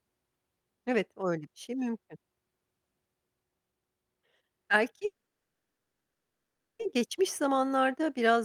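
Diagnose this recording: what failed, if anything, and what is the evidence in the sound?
A call audio freeze at 5.05–6.81 s. The speech stalls, fades to silence for about 1.5 s, then resumes without loss. Likely a network jitter buffer underrun.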